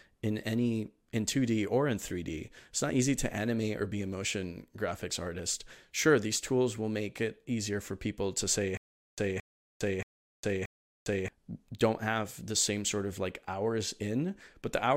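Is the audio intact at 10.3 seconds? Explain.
No, 10.3 s falls inside a stutter with silent gaps running from 8.77 to 11.28 s, most likely a player or stream stalling and replaying its last buffered fragment on each retry. A burst of about 222 ms repeats four times, each followed by roughly 406 ms of dead digital silence, so the pattern recurs every 628 ms with a mechanical, even rhythm. The speech that belonged in that span is missing.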